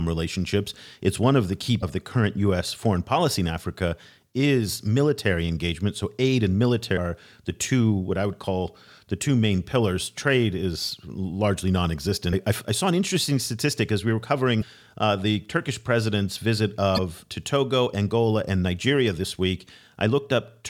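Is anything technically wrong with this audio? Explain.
Yes. The speech has damaged data in a compressed stream at 1.79–1.83, 6.94–6.98, 12.29–12.34, 14.59–14.64 and 16.94–16.99 s. At each point, corrupted bytes make the decoder misread frames and lose sync. Each roughly 40 ms break sounds like a brief chirp or blip.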